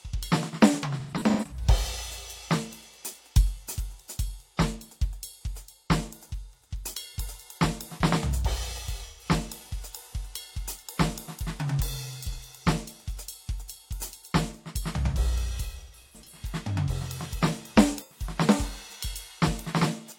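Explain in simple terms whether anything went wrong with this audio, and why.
The music has AAC frame loss with concealment. Bits of the stream went missing, and the player guessed from the last good sound, leaving short smeared, noisy patches at 1.0–1.65, 9.05–9.25, 12.33–12.38, 15.67–16.42 and 18.0–18.22 s.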